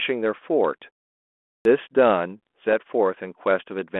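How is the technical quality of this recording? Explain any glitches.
The recording is narrowband telephone speech, band-limited to roughly 250 Hz to 3.4 kHz through ADPCM coding consistent with 32 kbit/s G.726, and it has two glitches.

At 1.45 s, a clipped start after a pause: following about 0.6 s of silence, the output path needs time to wake, so roughly 0.2 s of onset is missing and speech begins abruptly.

From 2.47 to 2.73 s, bit errors on an ADPCM link: sparse flipped bits disturb the decoder's step size and predictor, producing pops and rough, briefly level-shifting bursts.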